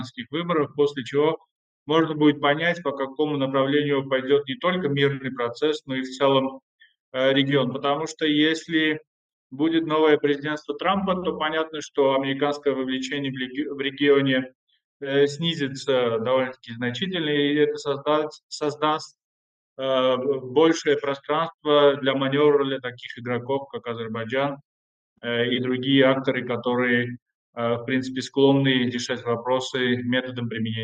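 No technical faults can be heard anywhere in this audio. Nothing in the sound points to a problem in how it was captured or carried.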